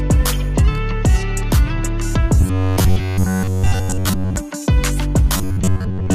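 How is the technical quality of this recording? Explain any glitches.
The recording has one recurring glitch. Robotic sound from repeated short buffers appears from 2.41 to 4.36 s and again from 5.37 to 6.15 s, likely caused by audio arriving too seldom, so playback loops its last fragment, roughly 11 ms, standing in for much of the real material. That loop sets a rigid 93.8 Hz buzz, turning the sound metallic while it only loosely tracks the original.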